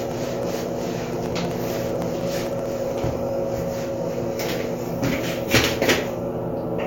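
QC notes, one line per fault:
0.05–3.29 s, periodic USB or driver dropouts: a steady train of about fifty tiny skips, one every 63.5 ms, roughly 16 per second. Each time, something seems to stall the USB bus or audio driver and around half a millisecond of sound is dropped outright, so the waveform jumps ahead and leaves a small discontinuity. These splices come through as evenly spaced ticks that ride on the signal and stop when the fault ends.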